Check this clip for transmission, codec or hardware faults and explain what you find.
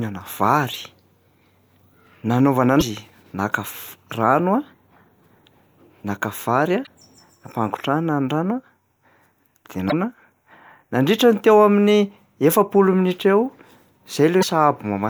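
Damaged data in a compressed stream at 2.77–2.83, 6.83–6.88, 9.88–9.93 and 14.39–14.44 s: corrupted frames confuse the decoder, which loses sync, producing a 50 ms disruption each time.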